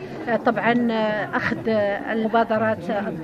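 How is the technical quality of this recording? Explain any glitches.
The recording has one audible glitch. It comes from damaged data in a compressed stream. At 2.21 s a short glitch cuts in and lasts until about 2.25 s, roughly 40 ms. Part of the compressed data there was wrong or missing. The decoder misread those frames and lost its place in the stream. It then searched for the next valid frame header before normal decoding resumed. The brief stretch of misread data comes out as a chirp, squawk, click or short hole.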